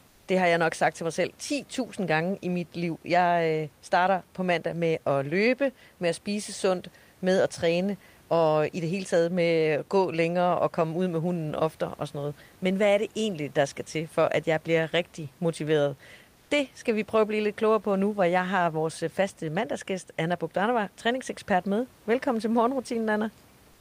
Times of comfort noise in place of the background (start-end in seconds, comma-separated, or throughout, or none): 0.07-0.27, 23.71-23.80